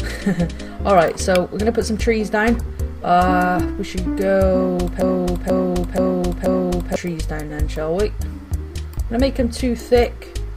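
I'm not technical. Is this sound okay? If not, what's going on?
No. From 5.01 to 6.96 s there is a broken-record loop. The player or stream likely stalled and kept replaying its last scrap of audio. About half a second of sound repeats four times back to back, and whatever should have played then is lost.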